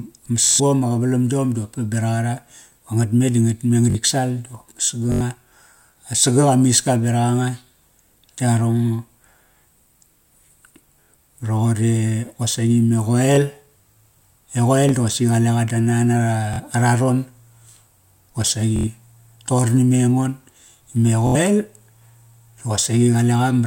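Speech with two recurring dropout faults. Bluetooth stutter at 0.44–0.60, 4.86–4.89, 11.03–11.09, 16.54–16.60, 18.76–18.88 and 21.27–21.35 s: late packets make the receiver replay stale audio as a buzzy stutter, and speech resumes about 23–139 ms further on. A repeated buffer occurs right after "ngatme di ngatme" at 3.90–3.95 s, and again at 5.12–5.21, 13.36–13.38 and 14.89–14.91 s. A 21 ms slice, which fits a 1024-sample buffer, replays one to four times with hard joins, skipping roughly 20–100 ms.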